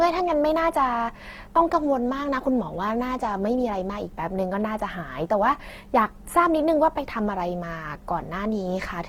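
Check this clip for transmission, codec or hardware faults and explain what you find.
One codec fault runs through the whole clip. Opus compression, throughout: the speech sounds grainy and rough, likely from Opus music-mode coding at a low bitrate, around 16 kbps, filling starved bands with folded or noise-like energy.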